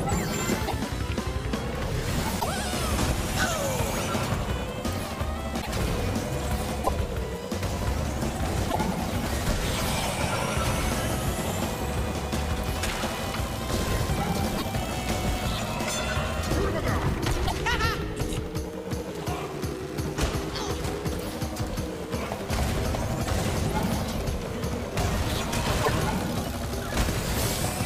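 At 0.67, 2.39, 5.61, 6.83, 8.69, 14.57, 17.46 and 25.82 s, short garbled bursts of 60 to 70 ms appear and the audio skips ahead. This is likely a broken MP3 bit reservoir: after missing frames, the next two or three frames, which fit 26 ms MP3 frames, decode borrowed bits from the wrong data. Unlike a clean dropout, each glitch also makes the audio jump ahead.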